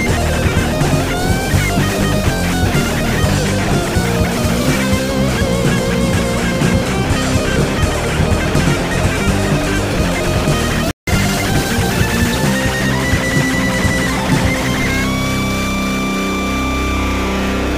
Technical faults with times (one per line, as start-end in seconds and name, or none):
10.91-11.07 playback stall
11.07-12.69 time-compressed catch-up